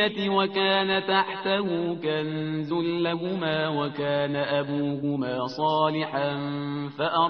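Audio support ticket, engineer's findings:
Clock slip clicks, 0.35 to 6.49 s. Faint single-sample ticks at steady intervals, roughly one a second, about seven in all. Likely two devices free-running on separate clocks with no sync, drifting about 30 ppm, so one sample drops or repeats per slip. Even spacing, not random timing, separates these from dropout or buffer-underrun clicks.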